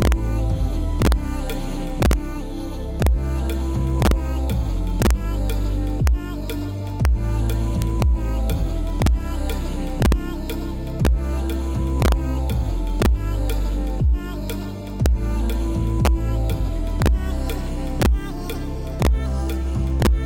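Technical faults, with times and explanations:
Throughout: integer overflow. Gain running about 2 dB too hot pushes the loudest peaks past the largest integer, and instead of being limited they wrap to the opposite sign. Only a tiny fraction of samples cross over, yet each one swings full-scale, producing violent cracks on loud sounds.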